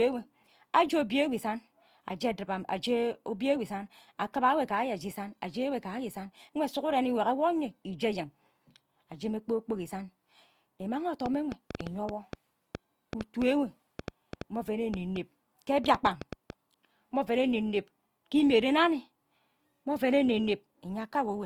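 Throughout, the speech was likely first squeezed through a low-bitrate codec, the sound pointing to Opus at around 24 kbit/s, then saved as high-bitrate MP3. This is low-bitrate audio saved at a high bitrate, so its coding artefacts remain, with nothing above 20.2 kHz.

From 11.26 to 16.51 s, repeated pulses, likely from interference, form a train of clicks: about twenty similar ticks, irregularly spaced at roughly 4.4 per second, peaking around 10 dB above the speech.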